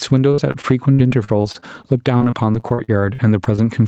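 Speech, with gain pumping throughout, a swing of around 10 dB, likely from gain set far too high with a fast limiter pulling it back. On a waveform the quiet stretches sit unusually high and the peaks look flattened. From 0.31 s to 3.60 s there is repeated packet loss (robotic sound): 22 short holes, the longest about 59 ms, each patched by stretching the previous sound, so about 17% of that span is concealment and the speech turns choppy. A spectrogram shows smeared, repeated harmonic slices and abrupt breaks, all under the 8 kHz ceiling of the call codec's band limit.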